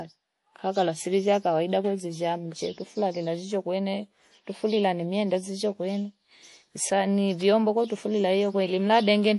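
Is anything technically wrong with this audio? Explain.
Yes. Throughout, the speech sounds watery, with nothing above 11.3 kHz. This is likely MP3 compression starved of bits, which fits 48 kbps: the treble is cut and weak frequency lines are dropped.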